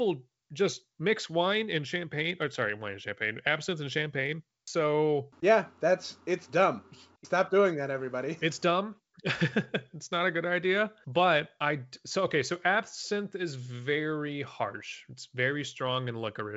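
No technical faults can be heard in this speech.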